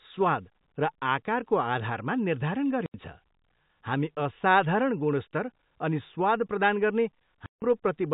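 A speech recording carried over a telephone-band G.711 channel, so nothing above 4 kHz reaches the ear. The speech drops abruptly into dead silence twice, at 2.86 to 2.94 s for 80 ms and at 7.46 to 7.62 s for 160 ms, each gap with hard edges. This is packet loss filled with silence: the receiver inserted silence where audio never arrived, and both gaps fit whole runs of 20 ms packets.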